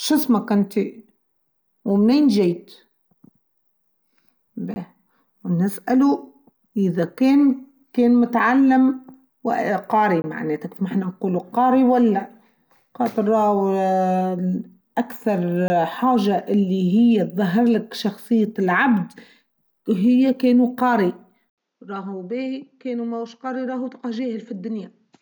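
Three brief holes, at 4.74–4.76 s, 10.22–10.24 s (just before "معناته ما حنا نقوله") and 15.68–15.70 s, each cut the speech abruptly. Each is a 20 ms block of digital silence, where samples were replaced by zeros.

From 21.50 s, right after "وهي كانوا قاري", an 80 ms gap precedes speech that sounds duller, quieter by roughly 10 dB, with nothing above 7.6 kHz and a faint new noise floor. The likely cause is the input switched to a poorer device.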